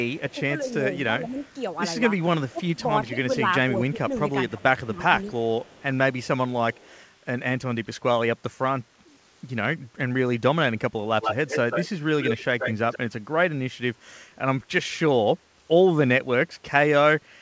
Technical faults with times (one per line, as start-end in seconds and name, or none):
0.13-0.71 echo leak
1.29-1.50 echo leak
2.52-5.36 speech suppressed in double talk
5.64-7.03 echo leak
11.21-12.98 echo leak